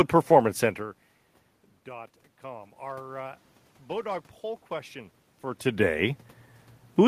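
From 1.85 to 4.99 s, automatic gain rising: after the input fell by about 20 dB, the gain control judged it too quiet and slowly raised its gain by about 4 dB, so the speech and the room noise swell together over three seconds.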